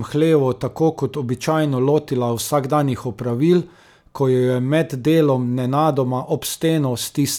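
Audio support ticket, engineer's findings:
No faults found on listening to the speech recording. No symptom to log, so no component or mechanism to report.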